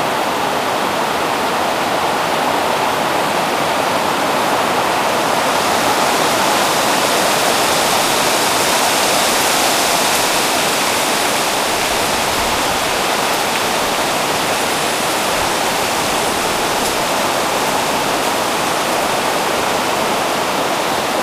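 Nothing here trips the ear: these sounds carry on with no dropouts, glitches or distortion anywhere along the way.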